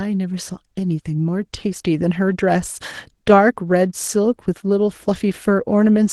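No technical faults can be heard in this speech recording. It has come through a WebRTC call path, and the top end stopping at about 12 kHz with the usual coding texture fits Opus at a modest bitrate, around 20 kbps.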